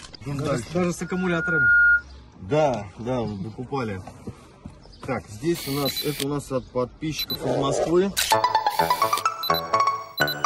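At 1.02 to 2.04 s a 1.4 kHz tone swells to about 10 dB above the sound: loudspeaker feedback squeal, a microphone-loudspeaker loop exceeding unity gain.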